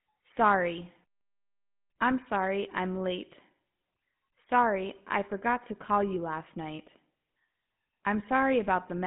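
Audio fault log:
Throughout: GSM full-rate codec. The speech sits in a 150 Hz to 3.5 kHz phone band with nothing above 3.8 kHz. A plainly audible buzzy, gravelly roughness comes from a vocal-tract model driven by sparse, regularly spaced pulses, which fits a 13 kbps GSM full-rate stream.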